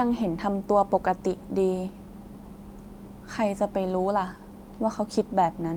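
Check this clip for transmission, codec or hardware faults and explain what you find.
There's one fault in this speech clip. At 1.29 s you get a lost packet rebuilt from error correction. A single packet went missing, and the next one carried a low-bitrate backup copy. The decoder played that copy, so there's no gap, just a brief 20 ms patch that sounds rougher and noisier.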